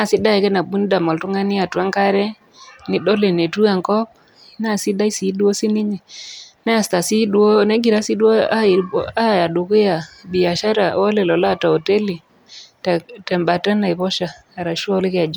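Listening to this speech recording, nothing stood out as a technical problem.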